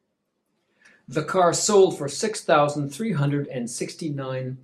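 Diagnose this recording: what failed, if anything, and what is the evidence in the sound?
Nothing in the signal chain shows a failure, and the speech stays continuous and steady throughout with no audible defect from any stage between capture and playback.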